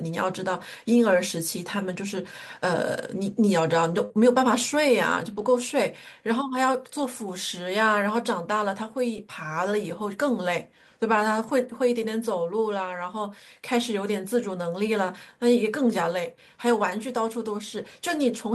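Speech, and it has two kinds of packet-loss damage. Most of it is lost packets rebuilt from error correction, at 1.11–1.13, 5.38–5.44, 6.98–7.04, 9.16–9.18, 11.48–11.50 and 16.90–16.92 s. Each spot lasts 20 or 40 ms, which fits one or two dropped 20 ms packets. There's no gap at any of them because the next packet carried a low-bitrate backup copy that the decoder played instead. Those stretches just come out briefly rougher and noisier. The other problem is a short concealed packet loss at 4.05–4.12 s. About 40 ms of audio never arrived, and the receiver papered over it by extending the last sound for roughly 44 ms before fading back into the real signal. That leaves a quick smear or wobble, and a short consonant there can drop out entirely.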